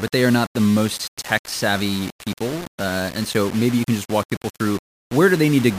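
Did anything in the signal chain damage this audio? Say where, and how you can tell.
Yes, the sample-format conversion stage. Grainy distortion rides on the speech throughout, roughly 15 dB down, likely low bit depth without dither: about 5 bits, rounded, so error tracks the signal.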